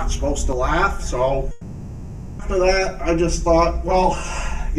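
From 0.53 s right to the end, the sound turns hollow and phasey. That's channel delay, or comb filtering: one channel runs roughly 5 ms late, and summing to mono cuts evenly spaced notches starting somewhere near 100 Hz.

Then from 1.51 to 2.41 s there's a long network dropout. The real audio is likely missing for about 880 ms, with the last sound stretched into a fading buzzy, hissy tail that fills the whole gap with no silence before the audio resumes.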